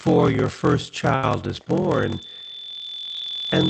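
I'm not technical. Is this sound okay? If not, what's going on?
No. Block size mismatch (padded) runs through the whole clip: one stage hands over shorter chunks than the next expects, and the gaps are filled with silence. That causes a steady low buzz around 43 Hz, fitting a 1024-sample block, and the speech plays at roughly 86% speed.

A short stall from a late packet comes at 1.15 to 1.30 s, right after "your first". A piece of audio arrived late, so the receiver held the last sound for about 75 ms until it caught up. Nothing is lost, but that moment drags briefly.

A loudspeaker feedback squeal starts at 1.93 s and lasts to the end. A microphone is picking up its own speaker, and a 3.5 kHz tone feeds on itself, growing over about a second and a half until it is roughly as loud as the speech.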